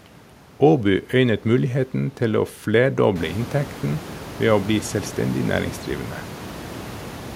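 The speech recording shows no technical faults; the background noise of the room, which rises by about 14 dB around three seconds in and then sits about 17 dB below the speech, belongs to the recording itself.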